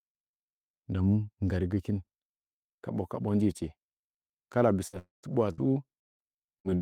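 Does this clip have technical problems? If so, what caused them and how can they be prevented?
Yes. The speech breaks up near the end, from about 4.9 s onward.

A burst of packet loss occurs twice, at 4.87 to 4.96 s and again at 5.53 to 5.61 s. Each time the sound freezes into a brief held buzz or hiss that fades, then the speech jumps ahead. About 60 ms of audio never arrived in each burst. The receiver patched roughly 50 ms of it by stretching out the last sound it had and turning that down. Forward error correction or modest redundancy in the stream would let the receiver rebuild short bursts like these.

From 4.99 to 5.26 s the sound again turns into a fading smear and then drops to near silence for about 140 ms before speech returns further on. This is likely a long network dropout. Roughly 240 ms of audio went missing, and nearly all of it was covered by concealment that decayed away before the true audio resumed. 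A more stable connection, such as wired rather than congested Wi‑Fi, and a jitter buffer that can absorb late arrivals help prevent gaps of this length.

Between 6.00 and 6.75 s the speech turns choppy, with pieces repeatedly chopped out. This is repeated packet loss (robotic sound): four separate gaps fall within this stretch, the longest about 170 ms. In total about 240 ms was lost and patched by continuing the previous sound, which covers roughly a third of the span. Reducing sustained network congestion, or lowering the bitrate when loss rises, keeps losses from clustering like this.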